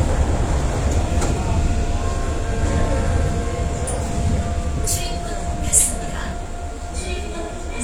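At 6.32 to 6.35 s, an overlap between stream segments cuts about 30 ms of sound, heard as a tiny skip; the waveform shows an abrupt step and the spectrogram a thin vertical broadband line.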